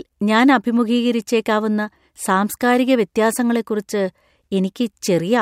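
No technical faults can be heard in the speech at any point.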